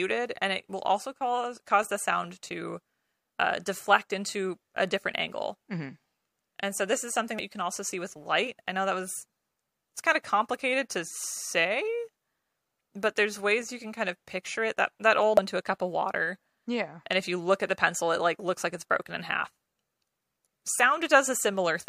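A short glitch cuts into the speech at 7.39 s, between "so this is something" and "you can also see", and a second blip lands at 15.37 s, just before "into a cup of". Both come from damaged data in a compressed stream: corrupted bytes make the decoder misread a frame, lose sync and hunt for the next frame header. Each lasts under 20 ms.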